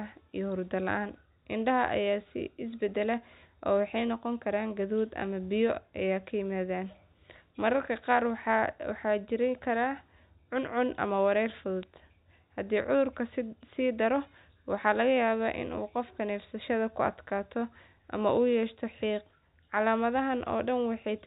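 No technical faults are audible.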